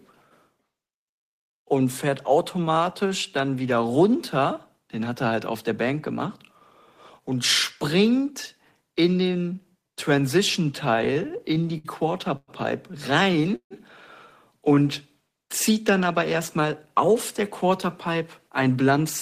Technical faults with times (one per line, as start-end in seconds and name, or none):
10.91-11.87 repeated stalls (stutter)
12.37-12.50 call audio freeze
13.23-13.73 repeated stalls (stutter)
14.57-14.84 jitter buffer slow-down
17.09-18.23 jitter buffer speed-up
18.63-19.06 jitter buffer speed-up